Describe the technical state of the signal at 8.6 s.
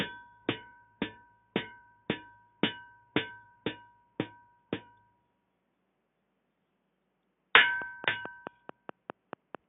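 Regular ticking at about 4.6 per second, roughly ten sharp clicks about 15 dB above the sound, runs from 7.82 to 9.56 s: a train of clicks, likely interference injecting pulses.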